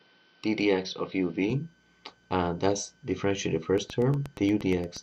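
From the start to 1.5 s, the input has likely switched to a poorer device. Nothing above 5.9 kHz gets through, so the sound is dull and boxy, with a faint added noise floor roughly 40 dB down. At 1.5 s it clears with no gap or level jump.

From 3.78 to 4.98 s, a train of clicks, likely interference or a faulty connection, injects about ten evenly spaced pulses at 8.43 per second. They sound as a steady ticking that rises a few decibels above the audio.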